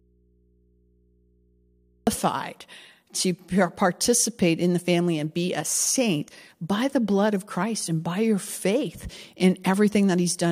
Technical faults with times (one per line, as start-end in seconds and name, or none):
0.00-2.07 audio dropout to a faint residue
4.04-4.06 damaged data in a compressed stream
6.27 damaged data in a compressed stream